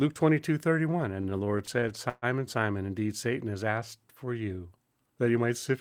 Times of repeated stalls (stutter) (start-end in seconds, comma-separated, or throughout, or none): 1.21-2.25